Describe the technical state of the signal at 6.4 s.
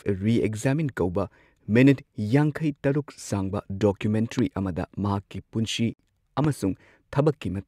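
A single loud pop lands at 6.44 s and clears by 6.47 s. It peaks at roughly 10 dB above the speech. It is likely a voltage step or pulse added to the signal, such as a plug or switch transient. The speech continues beneath it unbroken.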